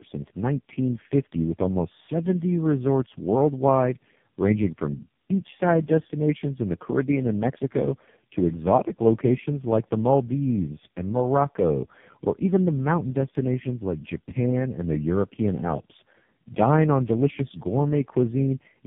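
Speech runs through tandem speech coding from start to finish, with nothing above about 3.6 kHz. The roughness, muffling and warbly smearing are heavier than any single narrowband codec leaves. That points to roughly three speech coders in a row, consistent with GSM full rate followed by two low-rate AMR-NB stages, each re-encoding the previous one's errors. A single low-bitrate codec would sound degraded but not this compounded and smeared.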